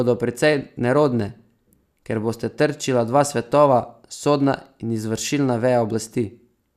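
A short bit of speech, and there's nothing technically wrong to point to anywhere in it.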